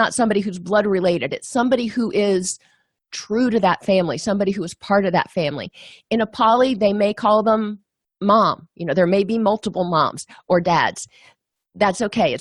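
The speech signal shows no technical faults at any point.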